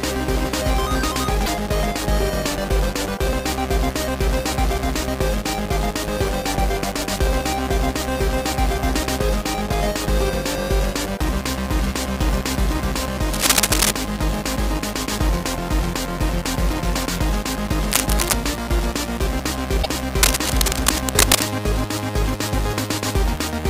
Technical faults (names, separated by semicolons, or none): broken MP3 bit reservoir; cable scratch noise